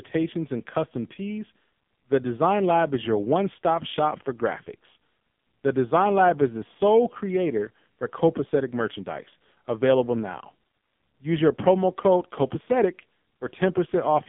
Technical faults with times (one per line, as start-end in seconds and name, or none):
0.00-14.28 AMR narrowband mobile codec